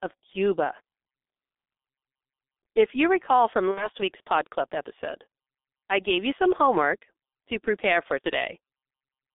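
Speech carried through a G.723.1 codec with heavy codec damage, consistent with a roughly 6 kbit/s telephony link. The band is confined to about 250 Hz to 3.6 kHz, so the voice sounds muffled and hoarse and consonants blur, because the coder works in 30 ms frames and updates its vocal model only slowly. On a spectrogram, energy stops sharply at 3.6 kHz with nothing below 250 Hz, and fine detail looks smeared across frames. VoIP packet loss concealed by the speech codec breaks in twice. From 3.71 to 3.88 s, just after "you recall from", a 60 ms gap points to two lost frames. From 8.22 to 8.28 s, after "homework to prepare for", 30 ms points to a single lost frame. In each case the decoder extends its last pitch and filter at falling gain, producing a stretched buzzy tone or coloured noise. The voice stays weakened briefly once packets resume. In the waveform these show as repeated, decaying cycles, and the spectrogram shows frozen, fading harmonics.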